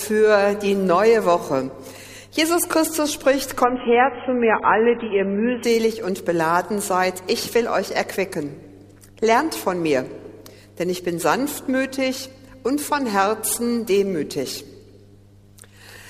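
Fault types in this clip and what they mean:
Adaptive stream at a lower bitrate: from 3.64 to 5.64 s the stream switches abruptly, without a gap, to a lower-quality version. Everything above 3.8 kHz vanishes and codec artefacts thicken, which fits a fall to roughly 16 kbit/s before quality returns.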